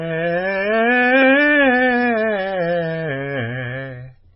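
From start to finish the music sounds dull and watery, with a swirling, bubbling texture and smeared attacks, and nothing at all above about 5.5 kHz. This is heavy MP3 compression, likely at a bitrate so starved (consistent with roughly 15 kbps) that the encoder chops off all the treble and keeps dropping weaker frequency components in and out between frames, which produces the unstable, underwater quality across the whole clip.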